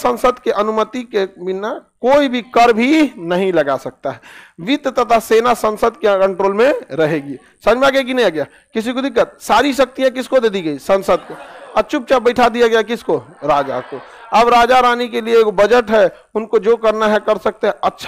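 No technical faults can be heard anywhere in this audio. Nothing in the sound points to a problem in how it was captured or delivered.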